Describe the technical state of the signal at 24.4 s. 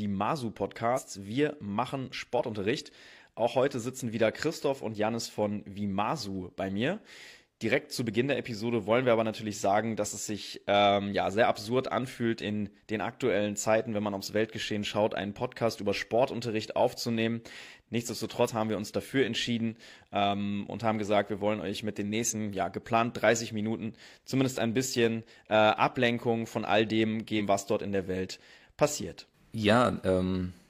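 At 24.4 s the speech signal is intact, with no fault present at that moment.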